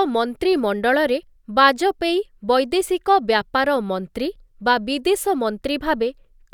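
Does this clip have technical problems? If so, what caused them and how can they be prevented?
No, there's nothing technically wrong to hear in this speech clip, so there's nothing to trace back or guard against.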